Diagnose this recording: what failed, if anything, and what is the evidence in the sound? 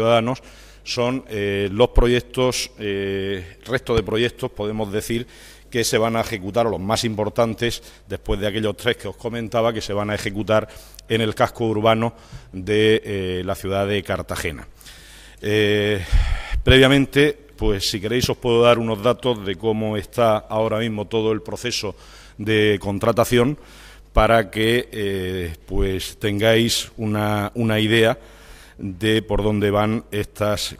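Two loud pops cut through the audio, at 3.98–4.00 s and 18.24–18.26 s. Each is a single sharp impulse of roughly 24 ms, rising about 10 dB above the surrounding signal while the sound carries on underneath. The likely stage is the analogue wiring, where a brief voltage step from a plug, a switch or static was added to the signal. On a waveform each appears as a tall spike. On a spectrogram each shows as a thin, full-height vertical stripe.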